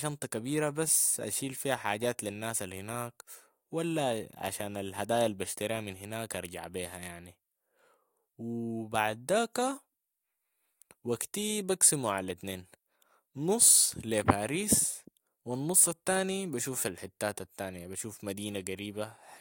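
No audible technical faults in the speech recording; nothing to flag.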